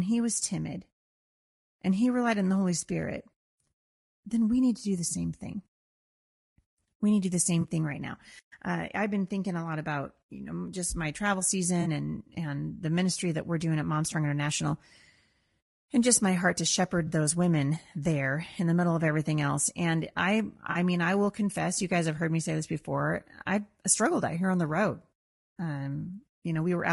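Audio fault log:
throughout: low-delay AAC compression. Likely a low-delay AAC codec squeezing the speech into too few bits, consistent with about 32 kbps. Its short frames resolve pitch harmonics poorly, so the voice sounds rough and grainy, with noise between the harmonics.
7.61–7.65 s, 11.81–11.87 s, 17.07–17.13 s, 20.71–20.77 s: AAC frame loss with concealment. Short stretches of coded audio, about 20 ms at 7.61 s and 40 ms at the others, went missing. The decoder filled each gap from the last good spectrum, leaving brief smeared, noisy patches.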